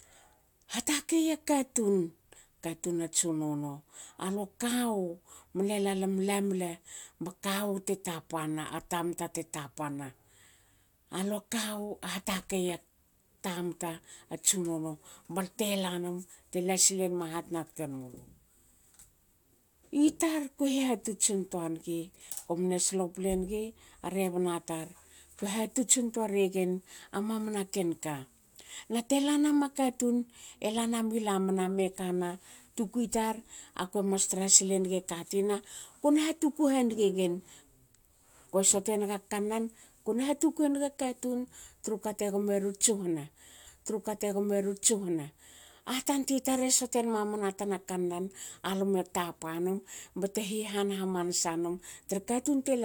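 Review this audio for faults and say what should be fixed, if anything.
A stream segment repeated from 43.66 to 45.68 s: the player fetched or queued the same segment twice, so about 2.02 s of speech plays again after a small blip at the jump back. Track segment sequence numbers and discard duplicates before queuing.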